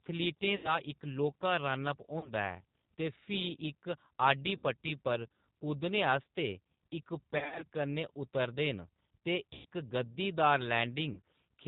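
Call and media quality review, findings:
G.729 codec (8 kbit/s) throughout: rough, synthetic speech; spectrogram shows a hard ceiling at 4 kHz, with smeared harmonics from the frame-based pulse excitation.

VoIP packet loss concealed by the speech codec at 0.56–0.75, 2.19–2.29, 4.57–4.63, 7.38–7.64, 9.53–9.65 and 11.13–11.20 s: buzzy, fading extrapolated tone. Waveform shows decaying repeated pitch periods; the 7.38 s gap after "पर कुद्दने आस्तै इक" comes in scattered bursts.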